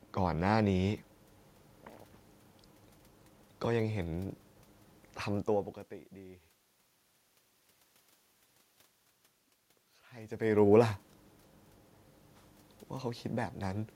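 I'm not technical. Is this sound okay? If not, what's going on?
Yes, the recording system is working properly. The background noise of the room is simply part of the recording, and the changes in loudness around 5.5 and 10 seconds come from the talker moving relative to the microphone.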